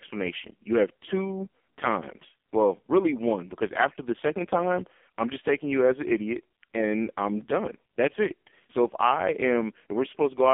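AMR narrowband mobile codec throughout: nothing above 3.5 kHz survives, and heavy, buzzy synthetic coding suggests AMR-NB's lowest mode, around 4.75 kbps, modelling the voice from sparse pulses.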